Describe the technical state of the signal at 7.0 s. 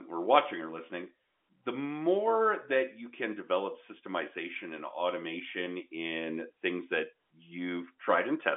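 At 7.0 s the audio is intact, with no fault present, only the usual narrow telephone band of G.711 coding with nothing heard above about 3.8 kHz.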